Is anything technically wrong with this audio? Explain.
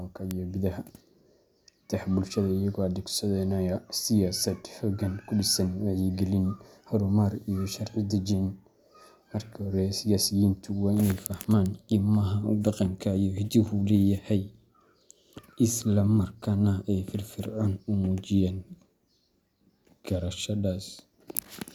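Yes. This speech clip has two bit error spikes, at 0.31 s and 12.67 s. Each is a single corrupted sample: one bit of the stored value flipped, so the sample jumps by a power of two and the next sample is back on the waveform. The first peaks at about −9 dBFS and the second at about −21 dBFS. Both sound like a brief, broadband tick that has nothing to do with the speech around it.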